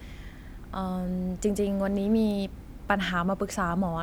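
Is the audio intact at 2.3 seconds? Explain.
No, there is a bit error spike at 2.31 s: one flipped bit jolts a single sample to about -23 dBFS, causing a sharp, broadband tick unrelated to the speech.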